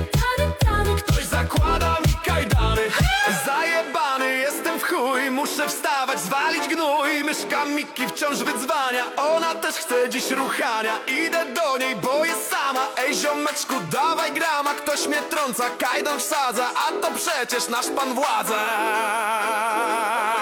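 No technical faults are audible.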